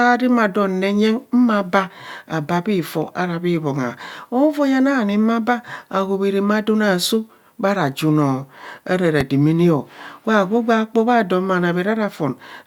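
At 9.21 to 9.23 s a single loud pop lands on top of the speech, peaking roughly ten decibels above it. The likely cause is a sudden voltage pulse, perhaps from a plug, switch, static discharge or driver glitch, entering the signal path and being shaped into a brief thump by the circuitry after it. Unlike a dropout or digital glitch, nothing is missing. The speech carries on unbroken beneath the pop.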